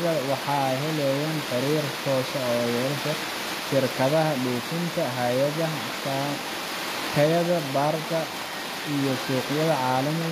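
From start to finish the s sounds turn gritty and metallic, and nothing reaches above 14.9 kHz. The likely cause is HE-AAC compression, at a rate that fits about 24 kbps, which rebuilds this speech's treble from copied lower bands instead of coding it.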